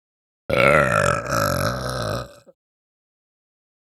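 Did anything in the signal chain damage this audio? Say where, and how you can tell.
Yes, at the converters: channels drifting apart on clocks roughly 100 ppm off, the delay nearing half a millisecond; a mono spectrogram shows comb notches sweeping throughout.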